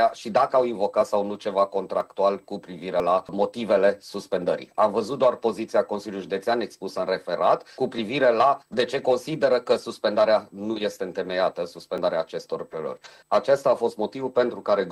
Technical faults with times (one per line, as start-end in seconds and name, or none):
1.01 overlap between stream segments
2.01 overlap between stream segments
3.00 overlap between stream segments
7.98 overlap between stream segments
11.98 overlap between stream segments
12.97 overlap between stream segments